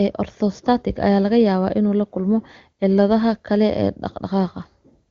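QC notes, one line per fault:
Nothing stood out on listening to this speech recording.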